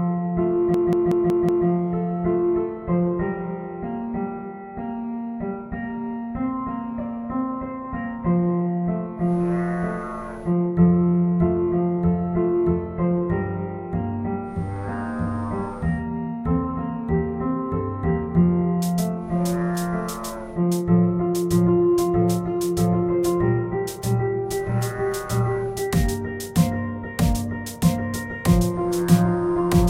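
From 0.74 to 1.67 s, a system hang loop replays one 186 ms slice five times while the system stalls, a 5.4 Hz machine-gun stutter.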